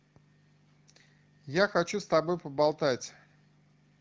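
No faults found; the speech carries the light coloration expected of an AMR wideband (HD Voice) path at 12.65 kbit/s, with the top band above 6.4 kHz rendered as shaped noise.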